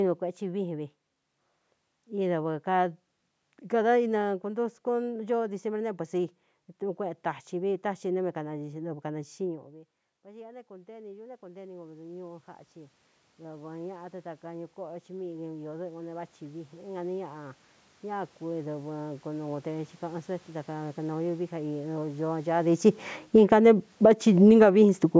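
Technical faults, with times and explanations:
10.23 to 22.25 s, automatic gain rising. Just before this, around 9.5 s, the talker moves and the voice drops by about 20 dB. The automatic gain control answers slowly. It raises its gain by about 20 dB over twelve seconds. Voice and room noise swell together.
23.17 to 25.15 s, automatic gain falling. Around 22.5 s the talker moves again and the input grows loud. The gain control then pulls its gain down by about 6 dB over two seconds. The voice starts loud and sinks, and the background sinks with it.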